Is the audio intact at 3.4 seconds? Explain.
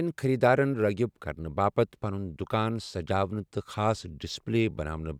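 Yes, at 3.4 seconds the speech plays through cleanly, with no dropout, click, distortion or other fault at that moment.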